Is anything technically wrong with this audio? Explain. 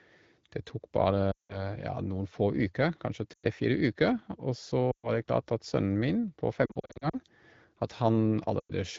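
Yes, there are lost AMR speech frames at 1.31–1.64 s (just before "ja noen få"), 3.33–3.46 s, 4.91–5.08 s (just before "det klart at"), 6.65–7.19 s and 8.60–8.72 s. Corrupted frames fail their check, so the decoder keeps repeating the last good pitch and vocal tract settings with falling gain. The longer gaps drop to near silence within two frames. The 6.65–7.19 s patch is short dropouts scattered across about half a second, so it sounds like a choppy warble. Speech comes back a bit weak after each one, over light, clear wideband coding.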